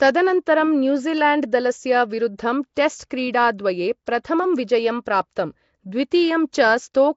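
Right through the speech there's a rough, hissy halo and a smeared underwater feel, with nothing above 7.7 kHz, likely Nellymoser compression, the old Flash codec, at something like 32 kbps.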